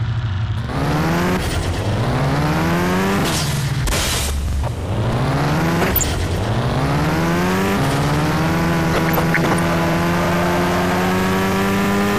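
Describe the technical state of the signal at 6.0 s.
At 6.0 s you're in the tail of a burst of DAB burbling that runs from about 5.81 to 6.04 s. Bit errors have slipped past error correction into the MP2 data, so wrong samples put short blips of noise into individual sub-bands, giving a burbling, blippy sound. It sounds like a dozen or so frames hit, from an error rate of about 0.3%.

Underneath that, the whole clip has a dull, gurgly, granular texture with upper bands flickering in and out. That's most likely MP2 compression at a low rate, around 80 kbps, starving the high sub-bands of bits.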